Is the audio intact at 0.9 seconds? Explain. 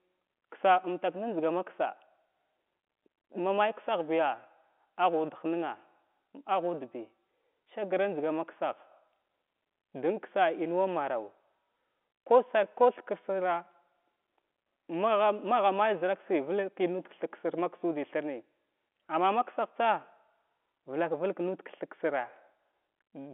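Yes, the audio is intact at 0.9 seconds, with nothing there beyond the narrow telephone band of G.711 coding, which carries no sound above about 3.8 kHz.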